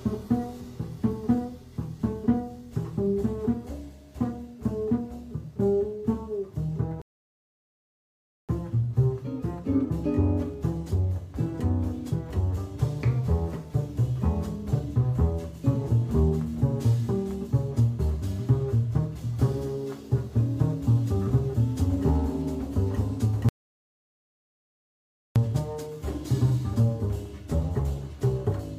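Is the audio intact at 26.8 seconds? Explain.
Yes, the audio is intact at 26.8 seconds, with no dropout, click, distortion or other fault at that point.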